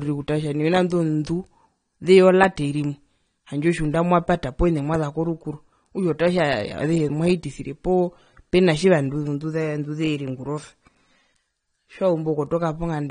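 From start to finish the speech sounds dull and smeared, with nothing above about 9.7 kHz and a fizzy, warbling edge on sibilants. The likely cause is AAC compression, with quantisation and band-limiting that point to AAC-LC at a low bitrate near 32 kbps.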